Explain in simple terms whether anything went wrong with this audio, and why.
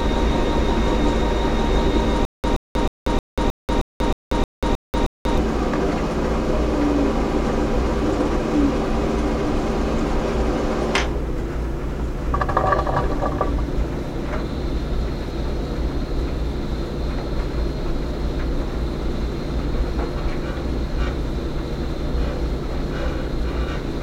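The playback likely stalled and kept retrying, causing a stutter with silent gaps: from 2.25 to 5.38 s, a 0.12 s snippet repeats ten times, separated by silences.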